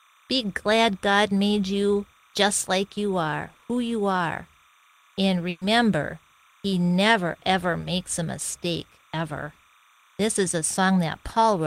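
Running under the whole thing there's timecode bleed: linear timecode at 30 frames per second leaking in from a nearby track or cable, flipping between tones near 1 and 2 kHz. It sits well down, around 35 dB below the speech, as a faint chirpy warble.

At 5.49 s there's a burst of packet loss lasting until 5.63 s. About 120 ms of audio never arrived, so the receiver stretched the last bit of sound and faded it across the gap. You hear a brief held, decaying smear, then speech picks up further along with that chunk gone.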